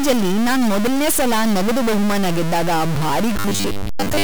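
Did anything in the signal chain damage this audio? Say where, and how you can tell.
Yes. From start to finish the speech carries distortion, and the pauses are filled with noise rather than silence. That points at the converter or its data lines, with a stuck bit the likely cause: one bit held fixed throws about half the sample values off by its weight.

From 3.39 s to the end, the speech turns into a rigid, metallic buzz pitched at 100 Hz while still loosely following the syllables. That is robotic sound from repeated short buffers at the driver or buffer stage, likely from 10 ms chunks being replayed in place of most of the audio that should have arrived.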